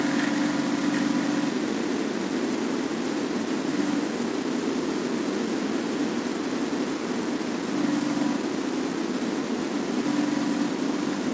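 No technical faults are audible anywhere in the speech.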